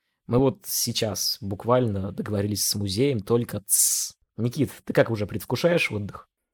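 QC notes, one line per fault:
No fault to note in the QC of this speech.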